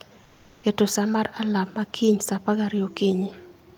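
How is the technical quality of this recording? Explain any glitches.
There is one glitch near the start. From 0.23 to 0.63 s, roughly 400 ms, the background loses its natural texture and turns into a flat, even hiss. It sits about 37 dB below the loudest parts and is only about 1 dB different in level. This is comfort noise in place of the background. The likely cause is discontinuous transmission, such as Opus DTX: the sender paused during a quiet stretch, and the receiver filled the gap with synthetic noise roughly matched to the room.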